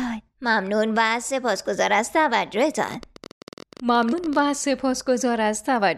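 A train of clicks runs from 2.83 s to 4.40 s, roughly thirty sharp ticks arriving at about 18.1 per second but at an uneven pace, each peaking around 5 dB above the audio and audible through quieter moments too. Because the clicks share one shape and keep recurring for over a second and a half, the likely cause is an external pulse source such as electrical interference or a faulty connection or power supply, rather than damage to the file. Inside that stretch, from 4.09 s to 4.13 s, is a separate fault: damaged data in a compressed stream. Here the decoder hits corrupted frames, loses sync and hunts for the next valid header, producing a single brief chirp or blip, about 40 ms long. It differs from the clicks in being one isolated event, not a repeated pulse laid over the audio.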